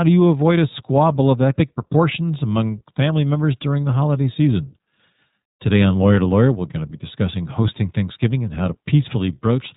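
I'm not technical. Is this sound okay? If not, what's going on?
No. Throughout the clip, the speech has been squeezed through the iLBC codec, a phone-call compression method. It codes the sound in 20 ms chunks, each handled on its own, and keeps nothing above about 3.8 kHz. That is why the speech sounds muffled and boxed-in, like a phone line, with a plainly audible rough, slightly synthetic edge on the voice for the whole recording.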